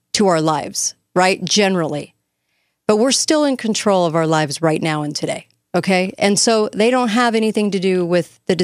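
No technical faults are audible.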